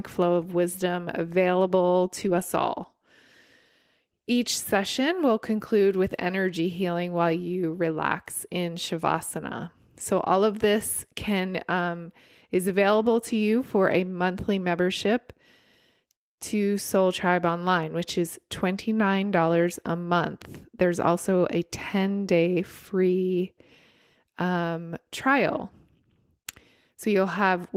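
No technical faults are audible.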